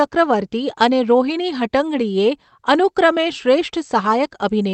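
No faults found in the speech; the call path's coding shows as its usual coding noise and a top end limited to about 8 kHz, which fits a wideband Opus setting.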